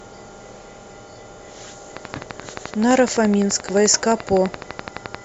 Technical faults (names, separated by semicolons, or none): train of clicks